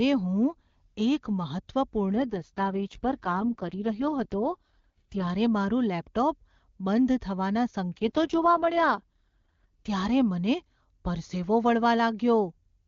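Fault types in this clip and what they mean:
AMR rate drop: the speech keeps its full wideband range and never breaks, yet from 2.16 to 5.30 s and again from 7.93 to 9.89 s it turns rough, raspy and synthetic. That fits the AMR-WB encoder being pushed from 23.85 down to 6.6 kbit/s to free bits for error protection. On a spectrogram the upper band edge stays put with no gap, but harmonics blur into grainy smear. The waveform stays continuous, with no dropout.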